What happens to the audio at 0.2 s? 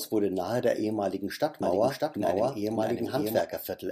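Nothing goes wrong at 0.2 s; the speech there comes through intact, with no dropout, click, distortion or other fault at that moment.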